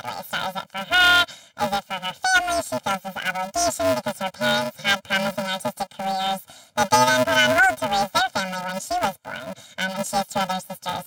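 Throughout the speech, planar audio read as interleaved gives a robotic buzz at 375 Hz. Each block, which fits 128 samples lasting 2.67 ms, is split and replayed left-then-right. Short blocks mean no octave jump, unlike pitch-shifting faults.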